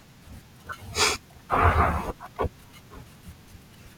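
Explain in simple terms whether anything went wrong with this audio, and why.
One small fault shows up in this speech clip, a repeated buffer at about 0.84 s. The playback device needed fresh audio, but it did not arrive in time. So the device played its last tiny slice of sound a second time. The slice is very short, which fits a buffer of about 10 ms. Because it is so short, you hear a quick click or brief buzz rather than a clear stutter. Essentially no audio goes missing.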